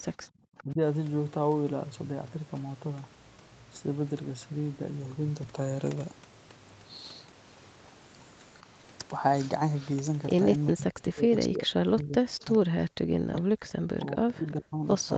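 Right at the start, from 0.27 to 0.8 s, the speech dips by about 15 dB in short bursts. That's speech suppressed in double talk, likely because the canceller couldn't tell the near talker from the far-end echo and ducked both. It comes back harder from 10.73 s to the end, with drops of about 40 dB. Alongside that there's an echo leak, a faint delayed copy about 405 ms behind, around 20 to 25 dB down, in brief scraps at 0.58, 13.36 and 14.48 s and longer stretches at 9.4 to 9.91 s and 11.99 to 12.58 s.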